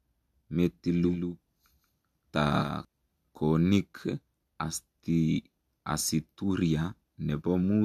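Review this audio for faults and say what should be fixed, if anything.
From 1.03 to 2.85 s there is a doubled audio track. A full-band copy of the speech trails by roughly 200 ms at about 5 dB quieter, likely from a second, slower capture path. On the waveform and spectrogram, each onset repeats at that fixed offset with no decay, and the copy switches on and off abruptly. Prevent it by monitoring each source through a single capture path and checking edits for overlapping duplicate regions.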